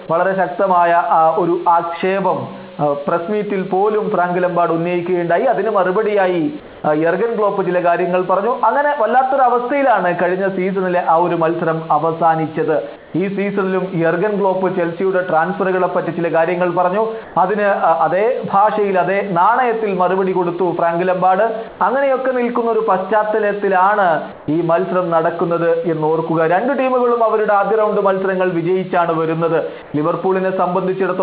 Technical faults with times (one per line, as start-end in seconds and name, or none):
6.60-6.84 comfort noise in place of the background
12.96-13.14 comfort noise in place of the background
17.24-17.36 comfort noise in place of the background
21.68-21.80 comfort noise in place of the background
24.32-24.48 comfort noise in place of the background
29.82-29.94 comfort noise in place of the background